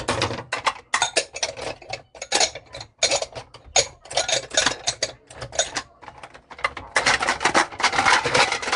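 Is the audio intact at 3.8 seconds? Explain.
No. Pre-echo at 3.75 s: a sharp attack late in a transform block spreads its coding noise backward, so about 11 ms of hiss precedes it and softens the hit. Nellymoser compression also runs through this moment, with the audio rough and hissy, noise-filled in weak bands, and empty above 10.6 kHz. That pattern fits the likely cause, Nellymoser Asao coding near 44 kbps.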